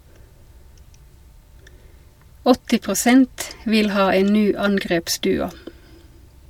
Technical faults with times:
none

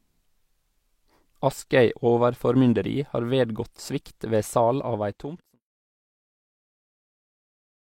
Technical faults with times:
none

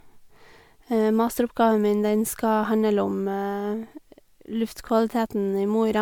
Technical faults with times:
0.00-6.02 generation loss

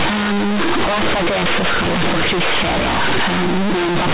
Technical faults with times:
0.00-4.13 companded audio read as linear

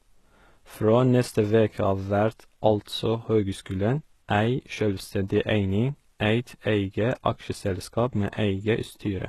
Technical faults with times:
0.00-9.29 HE-AAC compression

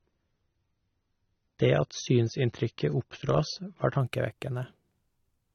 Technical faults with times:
0.00-4.00 adaptive stream starting at a low bitrate

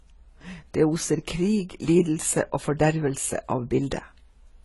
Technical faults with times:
0.00-4.65 transcoding between lossy codecs

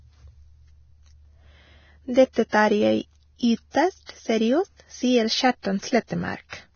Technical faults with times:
0.00-6.75 Vorbis compression
2.33-2.53 pre-echo
3.71-3.74 pre-echo
4.05-4.09 pre-echo
5.62-5.65 pre-echo

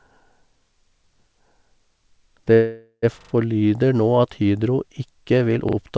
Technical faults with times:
2.54-3.05 call audio freeze
3.21-3.33 repeated buffer
5.69-5.77 repeated buffer

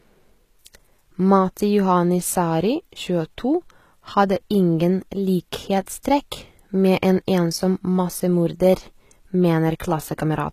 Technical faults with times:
0.00-10.52 HE-AAC compression
5.86 pre-echo

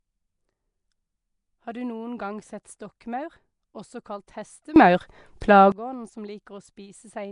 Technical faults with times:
0.00-7.32 Nellymoser compression
4.76-5.72 sudden gain jump
5.41 pre-echo

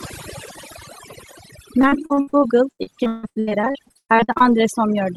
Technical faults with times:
0.00-5.17 overdone noise removal
1.81-4.44 repeated packet loss (robotic sound)

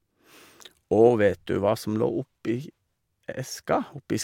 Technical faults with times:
none

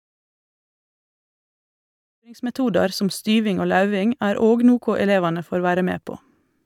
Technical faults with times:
none

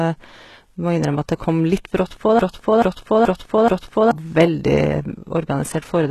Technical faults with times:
0.00-6.11 HE-AAC compression
2.39-4.11 broken-record loop

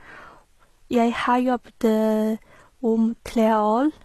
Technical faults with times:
0.00-4.04 HE-AAC compression

